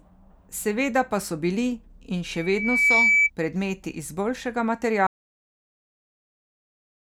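From 2.25 to 3.30 s there's loudspeaker feedback squeal: the mic hears its own speaker, and a 2.3 kHz tone swells over roughly 0.7 s to about 10 dB above the speech. Then at 5.07 s you get a cut-off end, with the speech stopping dead mid-sound into digital silence because the final buffers never got written.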